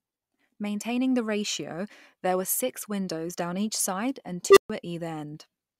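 After "down each side and", an unstable filter runs away at 4.50 s. A tone around 400 Hz swells to clipping within 63 ms, overflows, and leaves 130 ms of silence, far faster than feedback howl.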